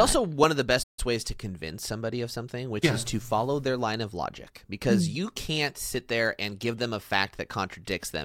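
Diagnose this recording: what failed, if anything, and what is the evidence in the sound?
A playback stall at the player stage, likely the output buffer running dry or its thread being blocked. After "one of the", the speech drops to silence at 0.83 s for 148 ms, then resumes at 0.99 s with "ways to convince somebody".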